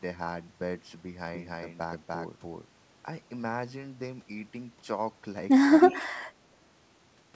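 A speech recording passed through a call path with nothing above 8 kHz, which fits a wideband codec such as G.722. From 1.28 to 2.66 s there is a doubled audio track. A second full-band copy runs roughly 300 ms behind, at about the same level. It has no room decay, and it starts and stops abruptly. The likely cause is a second, slower capture path mixed in with the first. From 5.89 to 6.06 s there is an echo leak. A faint copy of the far-end voice comes back 273 ms late, about 20 dB below the speech. This likely happens because a loudspeaker echo got past the canceller. Across 5.89 to 6.14 s there is also speech suppressed in double talk. The talker dips by up to about 15 dB, for roughly 150 ms in total. The likely cause is the canceller turning everything down while both sides spoke.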